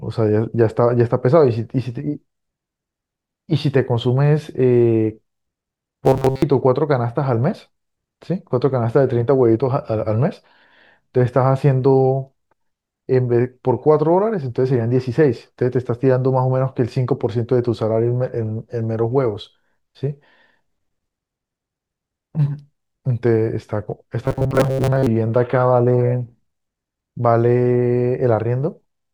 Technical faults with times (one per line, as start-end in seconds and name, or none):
6.06-6.42 robotic sound from repeated short buffers
24.25-25.07 robotic sound from repeated short buffers